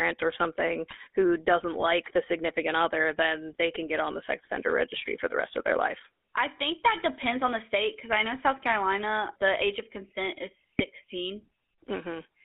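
This speech clip runs through the GSM full-rate codec the whole way, with that buzzy, gravelly roughness of the 13 kbps coder and a narrow line band of roughly 250 Hz to 3.5 kHz. On top of that, GSM bit errors corrupt a few frames each at 0.90–0.98 s after "or something", 4.45–4.50 s after "get on the sex", and 10.78–10.84 s after "age of consent is", turning the sound into brief squawks and gargles.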